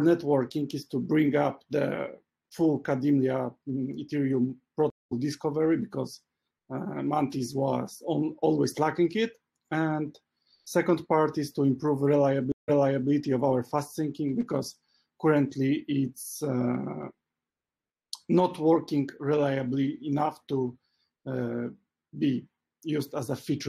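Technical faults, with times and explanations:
4.90–5.13 s, stream reconnect: the connection drops and the sound cuts to silence for 210 ms. Playback resumes roughly a fifth of a second further on, so a short stretch is skipped. A fresh decoder started mid-stream brings the first frame in faded.
12.52–13.10 s, stream reconnect: a second break leaves 160 ms of silence. The server resends buffered audio, so playback resumes 0.42 s earlier and repeats that stretch, again easing in as the new decoder starts.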